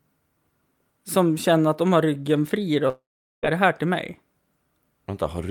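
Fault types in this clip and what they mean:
long network dropout: The speech cuts out at 2.89 s and comes back at 3.45 s. At the break, the last sound is drawn out into a short buzzy tail that fades away. After about a tenth of a second, only near silence remains, lasting about 0.42 s. When the speech resumes, about 0.54 s of it is simply missing. The likely cause is a network stall, where no audio arrived and the receiver filled the gap itself.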